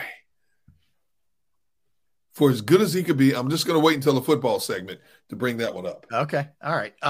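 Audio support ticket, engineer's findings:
No faults found in the speech clip. No symptom heard, so no component or mechanism to flag.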